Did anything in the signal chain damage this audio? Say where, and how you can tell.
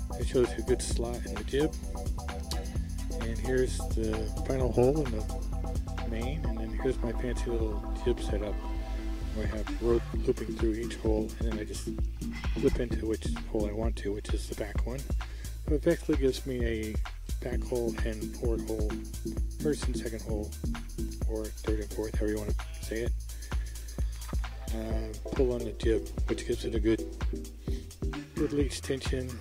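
No, nothing in the signal chain stood out as damaging this audio on listening.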